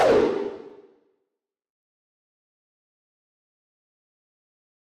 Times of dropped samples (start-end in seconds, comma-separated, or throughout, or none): 0.70